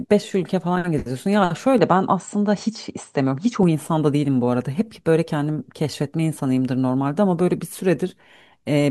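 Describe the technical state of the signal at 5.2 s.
At 5.2 s the signal is intact, with no audible fault at that moment.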